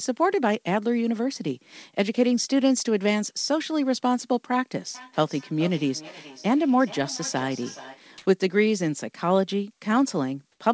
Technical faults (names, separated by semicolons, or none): feedback echo between two devices; comfort noise in place of the background